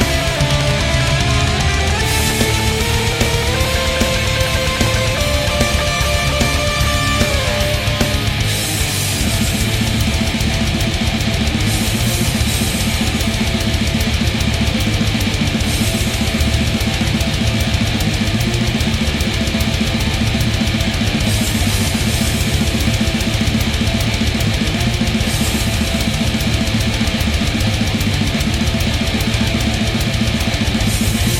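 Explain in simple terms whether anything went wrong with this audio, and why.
Nothing went wrong here, and you can listen to the whole thing without hearing anything that trips it up or gets in the way.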